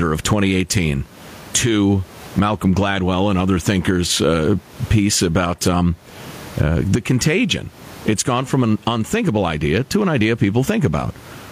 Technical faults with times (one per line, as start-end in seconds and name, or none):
0.00-11.51 gain pumping